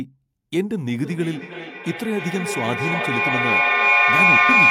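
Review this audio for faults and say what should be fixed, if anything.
A microphone-to-loudspeaker loop gaining level each pass causes feedback howl from 1.05 s to the end, a tone near 2 kHz with repeats about 300 ms apart, peaking about 9 dB above speech. Muting one of the devices in the shared room, or using headphones, keeps the loop from closing.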